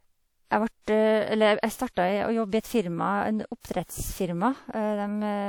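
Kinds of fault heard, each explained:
Pre-echo: a transform codec spreads its quantisation noise across a whole block, so when a sharp onset lands late in the block, noise sized for the loud part spills into the quiet stretch just before it. In this speech clip a brief hiss runs ahead of four attacks, at 0.82, 1.60, 3.60 and 3.85 s, each lasting 32 to 57 ms, and those onsets sound softened and smeared rather than crisp.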